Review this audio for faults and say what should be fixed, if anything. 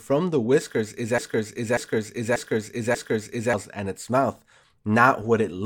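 From 1.18 s to 3.54 s the speech falls into a broken-record loop: one fragment of about 0.59 s plays four times back to back, and the speech that belonged in that span never arrives. The likely cause is a player, encoder or stream that stalled and kept resending its last buffered piece. On a waveform the identical block repeats like tiles; a spectrogram shows the same pattern stamped out at regular 0.59 s intervals. To prevent it, detect stalled input and fall back to silence or reconnect instead of replaying stale buffers.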